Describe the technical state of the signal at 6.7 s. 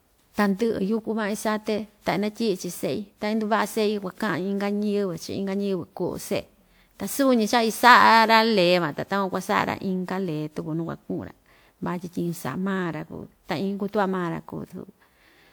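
At 6.7 s the speech sounds swirly, smeared and hollow, with consonant attacks blurred. The same quality runs through the whole clip, not just this moment, and the band stays open almost to 20.1 kHz. This is generation loss, likely from around seven rounds of decoding and re-encoding with a WMA-style codec at a rate near 128 kbit/s. Each pass re-quantises on a shifted frame grid, so noise accumulates.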